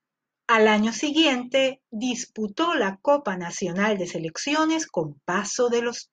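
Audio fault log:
Nothing to log here, as the speech comes through without any faults worth noting.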